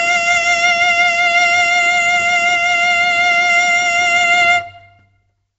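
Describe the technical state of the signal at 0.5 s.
At 0.5 s the music carries a rough, hissy halo and a smeared, underwater quality, with nothing above 7.7 kHz. That points likely to Nellymoser compression, which fits a 32 kbps stream.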